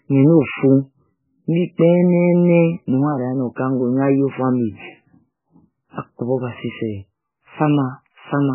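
Throughout the speech, nothing sounds above 3 kHz, with heavy watery swirling and smeared onsets, likely MP3 compression at a very low bitrate, consistent with about 8 kbps.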